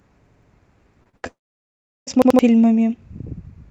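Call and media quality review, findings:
Repeated buffer, 0.26–0.51 s and 2.22–2.39 s. Stutter: one 85 ms chunk replays three extra times, then twice more later, with hard joins, consistent with a 4096-sample playout buffer underrunning. Roughly a third of a second, then about 150 ms, skipped. Identical repeats distinguish it from concealment, which smears rather than copies.

Short concealed packet loss, 1.03–1.07 s and 1.09–1.15 s. Brief smears where 20 ms and 40 ms never reached the decoder; the decoder extended the preceding sound and crossfaded back. No exact repetition and no audible gap, unlike the stutters.

Burst of packet loss, 1.17–1.25 s. About 60 ms missing in one run. Concealment holds the last sound as a buzz or hiss that decays, then audio resumes further on. Longer and more clearly faded than the preceding smears, but it never reaches silence.

Long network dropout, 1.27–2.09 s, likely upstream network loss. 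About 800 ms never played. The concealment tail fades within a fraction of a second, leaving about 720 ms of silence, then audio returns past the lost section. The silent stretch separates it from a burst. The Opus call path, band-limited to 8 kHz, carries this cluster.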